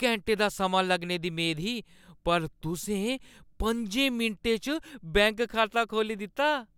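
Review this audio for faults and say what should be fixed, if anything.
Nothing needs to be fixed, since the review of this audio turns up no faults.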